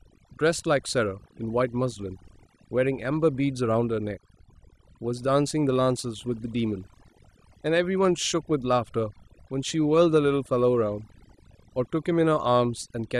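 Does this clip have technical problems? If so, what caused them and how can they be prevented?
Yes: overdone noise removal runs throughout, muting individual bands near the noise estimate, leaving twinkling specks, unlike a gate's whole-signal on-off pumping. Prevent it by setting the reduction gentler and checking quiet passages before committing.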